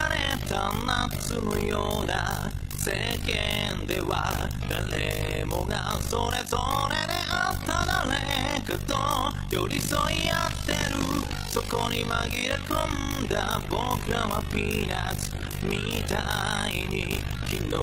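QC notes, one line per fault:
Throughout, overlap-add ripple: uneven frame overlap dips level about 60 dB around 50 times a second, robotic flutter; regular waveform notches, vertical spectrogram stripes.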